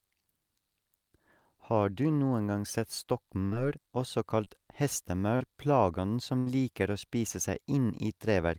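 A burst of packet loss at 3.45 to 3.55 s, right after "du noen gang sett", drops about 60 ms of speech. The receiver stretches the last sound into a fading tail of about 62 ms, then resumes further on, skipping the lost stretch.

Short concealed packet loss follows at 4.44 to 4.48 s and 5.36 to 5.42 s. About 20 ms and then 40 ms fail to arrive in time, and each gap is filled by continuing the preceding sound before blending back, heard as a brief smear or wobble.

A second burst of packet loss at 6.38 to 6.48 s, just before "liker å spise", loses about 80 ms. A faded extension of roughly 79 ms covers it, and the speech picks up again with that portion missing.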